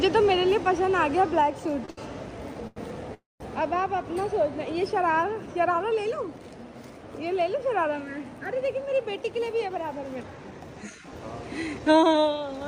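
Around 1.85 to 1.99 s there are two back-to-back short stalls from late packets, lasting 26 ms and then 72 ms, and another at 2.67 to 2.78 s lasting 91 ms. Each time the jitter buffer ran dry, so the last sound is held a bit too long, with a faint buzz or dip. Then it picks up right where it left off, with nothing lost.

At 3.14 to 3.42 s there's a call audio freeze of about a quarter second. The sound smears into a fading buzz, then about 170 ms of near silence, and carries on from the same spot. Packets were likely held up in transit.

From 9.39 to 11.80 s you get a jitter buffer speed-up. The receiver trimmed tiny pitch-period slices over and over to shed a backlog of roughly a fifth of a second. Playback runs at about 109% speed, so it sounds a little hurried but keeps the same pitch.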